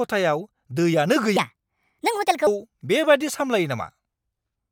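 From 1.37 to 2.47 s, a section at the wrong speed plays 1.44 times fast, likely a clock mismatch, raising pitch about seven semitones; spectrogram harmonics jump upward, waveform compressed.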